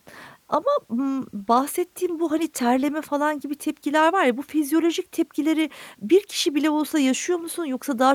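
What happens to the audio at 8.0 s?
Nothing goes wrong at 8.0 s; the speech runs through that moment intact, with no dropout, click, distortion or other fault.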